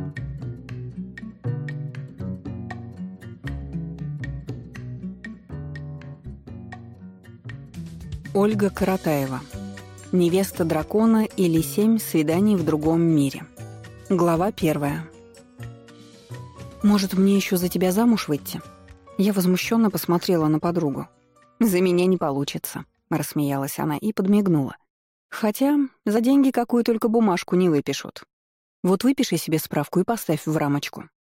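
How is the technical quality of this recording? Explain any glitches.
There is one audible glitch. At 26.17 s the sound jumps forward, with a short piece of about 50 ms gone. This is likely audio missing between chunks: a recorder working in 10-second blocks drops a sliver while switching blocks. Unlike a dropout, there is no silent gap; the two sides butt together directly.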